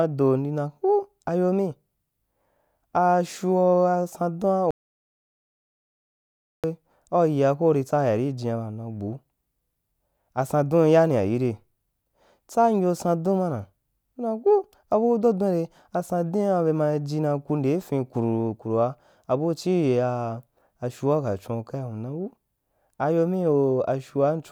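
Speech, with an audio dropout to silence from 4.71 to 6.64 s, just before "we au yia ko": 1.93 s of sound cuts to silence, likely from lost input. It shows as a flat waveform line and an empty spectrogram band with no room tone.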